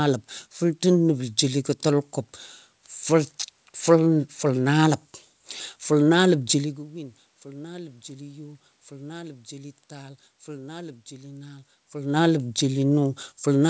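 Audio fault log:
Nothing stood out on listening to this speech recording.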